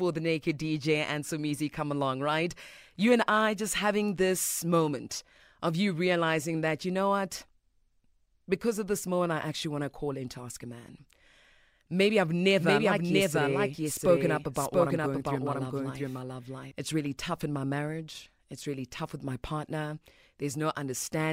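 From 12.59 to 16.71 s the speech plays as a doubled audio track: a second, equally loud copy trails by roughly 0.7 s, likely from a slower capture path. The spectrogram shows every syllable repeated at full band without smearing, and both edges cut abruptly.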